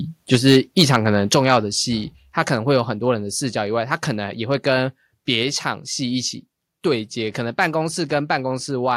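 From 0.33 to 0.96 s the loudest syllables carry a harsh, crackling edge: microphone overload, with the peaks pushed about 5 dB past what the converter can represent, so their tops are sliced flat. Only a small fraction of the waveform, on the order of one or two percent, is actually clipped, which is why the damage sounds like bursts of grit on the peaks rather than a constant fuzz. Unlike a limiter or compressor, which would hold the peaks down cleanly, this adds new jagged harmonics, and the likely cause is input gain set too high at the microphone.

At 0.35 s, just into that distorted stretch, the whole signal (voice and background together) drops by about 3 dB in a single step. At 1.35 s it falls again, by about 5 dB. This is the microphone volume stepped down, likely by call software reacting to the clipping and lowering the device's input level. It differs from automatic gain control riding the level, which would fade smoothly. 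Here each change is an instant jump that stays put, and it leaves the sound quieter afterwards.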